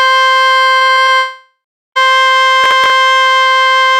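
Between 0.77 and 1.10 s, repeated packet loss (robotic sound) sets in. Packets keep arriving lost or late, and the receiver patches each hole by stretching the last bit of music. Four short holes, the longest 34 ms, leave about a third of the span concealed, so the music turns choppy.

From 1.18 to 1.97 s, a long network dropout is the likely cause of the music cutting out. Nearly 0.8 s of the music never plays. A fading continuation of the last sound bridges the start of the gap, then about 0.36 s of silence follows before the music resumes further along.

At 2.64 to 2.90 s, processor overload crackle appears. The processor falls behind and misses a run of deadlines on tiny buffers of around 3 ms each, with roughly seven skipped outright. Each skip leaves a hard-edged hole, and together they form a brief gritty crackle over the music.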